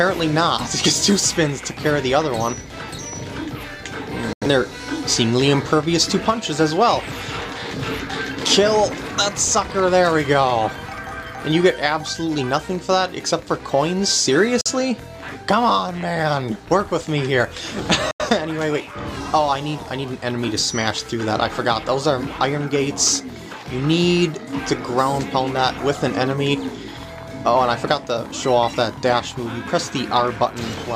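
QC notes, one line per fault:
4.33–4.46 s, 14.61–14.70 s, 18.11–18.25 s: digital broadcast dropout. Audio fades out within 3 ms and mutes until valid frames resume, consistent with one or two lost frames each.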